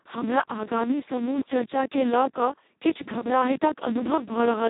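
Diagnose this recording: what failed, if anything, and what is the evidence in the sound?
Speex codec damage runs through the whole clip, so the failure sits at the codec stage. The speech sounds hoarse, buzzy and close to robotic, with heavy coding damage, which points to a very low setting of roughly 2 kbps. At that rate the CELP coder has almost no bits left to describe the excitation, so the voicing is rebuilt coarsely and the result approaches a vocoder.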